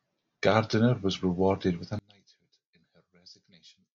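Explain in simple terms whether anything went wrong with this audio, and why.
Something goes wrong at 1.99 seconds and lasts to the end. The speech suddenly drops away and becomes very faint. This is likely one channel inverted: one side's signal is flipped upside down, so when both sides are combined they cancel each other out.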